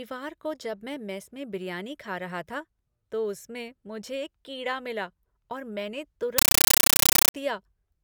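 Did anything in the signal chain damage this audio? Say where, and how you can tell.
Yes. From 6.38 to 7.34 s the speech is replaced by loud, chattering static, which is a compressed stream played as audio. That's a playback or digital-link fault: an AC-3 bitstream went out over S/PDIF or HDMI and got treated as plain samples instead of being decoded. You can hear the frame structure in it, with noise bursts of about 9.3 ms then silence, repeating at 31.25 Hz, which fits a 448 kbps Dolby Digital stream.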